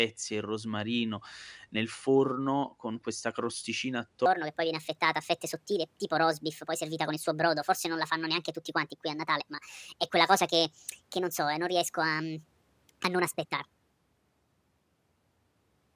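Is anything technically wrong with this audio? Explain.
Yes. From 4.26 s to the end, a wrong sample rate makes the speech run 1.45 times fast and about 6.45 semitones high, consistent with 22 kHz audio played at 32 kHz. On a spectrogram, harmonics jump upward and syllables compress in time.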